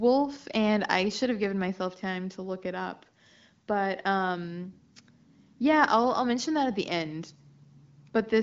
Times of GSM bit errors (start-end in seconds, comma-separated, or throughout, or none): none